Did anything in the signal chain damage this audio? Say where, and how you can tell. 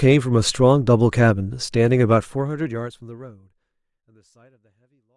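No, nothing in the chain seems to have hurt this speech; the only change in level is a gentle, editor-style fade-out that begins at around 2 s and eases away smoothly with no click or hard edge at the end.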